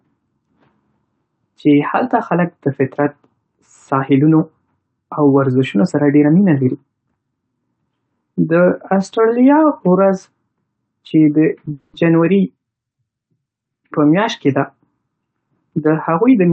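Speech, carried over a call path whose audio tops out near 8 kHz, shows two faults. From 11.72 to 11.96 s there is a call audio freeze: the last sound is stretched into a fading buzz or hiss for about 210 ms, likely because delayed packets emptied the jitter buffer. Afterwards the speech resumes where it stopped, with nothing lost but about 210 ms of added delay. From 15.12 s to the end, a jitter buffer speed-up trims repeated pitch-period slices, roughly 150 ms in total. The speech plays at about 110% speed with unchanged pitch and sounds hurried.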